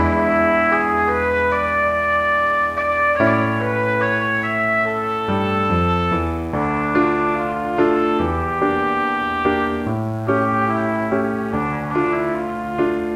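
A mains buzz runs from start to finish, sitting roughly 30 dB under the sound. It is built on 60 Hz. Sharp switching spikes, as from a dimmer, rectifier or unshielded line, enter twice per cycle, so the interference carries a dense series of harmonics reaching into several kHz. That spread is what separates it from plain hum, a smooth, low tone at 60 or 120 Hz. Here it sounds as a steady, raspy edge.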